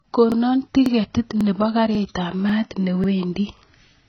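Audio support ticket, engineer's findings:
AAC compression, throughout. Nothing above about 6.7 kHz, dull smeared highs, warbly fizz on sibilants and sustained vowels. Likely AAC-LC at a starved bitrate, consistent with roughly 16 kbps: the encoder drops the upper band and coarsely quantises the rest.

Overlapping chunks, at 0.32, 0.86, 1.41, 1.95, 2.49, 3.04 and 3.58 s. Regular stutter, each join replaying a 44 ms slice. Chunking stage: 0.5 s blocks, each starting before the previous one ends, so the overlap plays twice every ~0.54 s.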